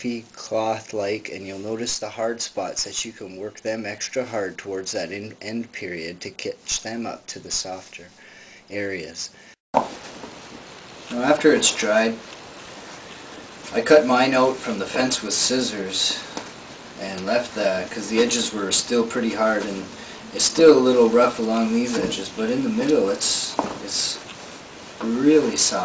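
No technical faults can be heard anywhere in this audio.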